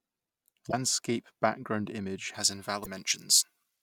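At 0.69 to 0.74 s there is damaged data in the compressed stream. A short run of bytes arrived corrupted. The decoder could not read those frames, lost its sync and hunted for the next valid header. The result is a brief glitch of about 50 ms in the speech.

From 2.34 s, just after "background image", the pre-emphasis was left on until the end. The treble was lifted along a J.17 curve, and the matching de-emphasis never followed. Highs sit about 11 dB hot at 10 kHz relative to 1 kHz. The speech turns thin and glassy, with sharp sibilants.

At 2.82 to 2.87 s a second burst of damaged data occurs inside that bright stretch. Again the decoder loses sync for about 50 ms.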